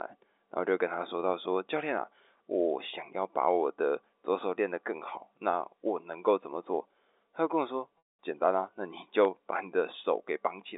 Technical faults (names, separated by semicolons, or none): clock drift buffer slips; packet loss with pitch repetition